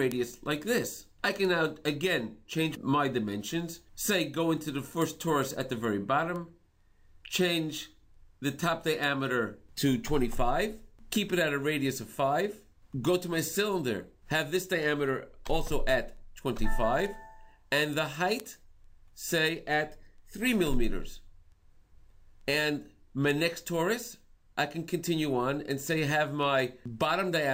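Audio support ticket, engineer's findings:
Sharp ticks of uneven strength at a steady rate of about one every 0.4 s, roughly 70 in all, from 0.12 s to 27.32 s. Word clock ticks. The digital receiver is not locked to the sender's clock and drifts by roughly 50 ppm. At each clock slip, one sample is dropped or repeated and a few are misread.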